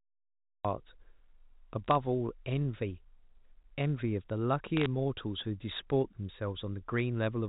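A cut-off start runs from 0.0 to 0.65 s. The recording began late, so digital silence fills the opening and the speech jumps in mid-sound at 0.65 s with no natural attack or fade, as if the first syllable were chopped.

Bit errors on a digital phone line strike at 1.84 to 1.95 s, 4.77 to 4.86 s and 6.98 s. On this A-law telephone path, flipped bits corrupt single samples, and hits on the sign or high bits give sharp ticks and brief crackle over the unchanged speech. The burst near 4.8 s has the densest errors, and the one at 1.9 s is lighter. The burst at 6.98 s is the sparsest.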